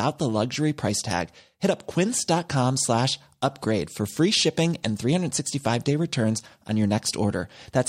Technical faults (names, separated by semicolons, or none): none